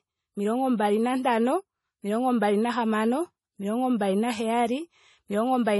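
MP3 compression damage runs through the whole speech clip, from start to finish, and it is heavy. The sound has a watery, swirling quality, and there is no content above 11.5 kHz. The likely cause is low-bitrate MP3 encoding, which fits a rate around 32 kbps. With too few bits, the encoder discards weaker frequency lines that flicker on and off between frames, and it cuts off the treble at a fixed frequency.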